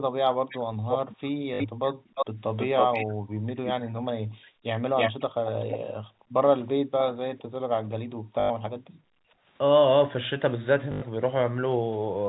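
The clip is speech over a call with three recurring faults. First, an echo canceller reacting to loudspeaker playback clamped the microphone, producing background gated by the echo canceller from 0.00 to 2.15 s, 3.14 to 4.66 s, 5.93 to 6.35 s and 8.05 to 9.45 s. Within each span the room sound dips by as much as about 40 dB, for anywhere from under half a second to around a second, then comes back once the canceller releases. Second, there is an echo leak: a delayed second copy of the speech trails the original. The likely cause is the far side's echo canceller failing to strip its loudspeaker's output from its microphone feed and sending it back. From 0.49 to 3.96 s the copy lags by 320 ms and sits only about 5 dB below the speech. From 4.96 to 5.79 s it lags by 468 ms at a similar level, and from 6.56 to 7.91 s it keeps the 468 ms lag but drops to about 15 dB down, so it is fainter there. 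Third, the receiver hit packet loss with last packet repeated. When packets failed to arrive it replayed the last one until new audio came, and because those repeats recur once per 20 ms packet, the run buzzes at around 50 Hz. The result is a short robotic stutter at 1.54 s, lasting 60 ms, which fits three 20 ms packets, and again from 8.40 to 8.50 s and from 10.92 to 11.02 s, each 100 ms long and consistent with five packets.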